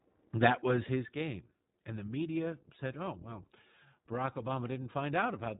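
Throughout, the speech sounds plainly rough and slightly synthetic, with nothing above 3.8 kHz. This is iLBC codec damage, which fits its 20 ms, 15.2 kbps mode.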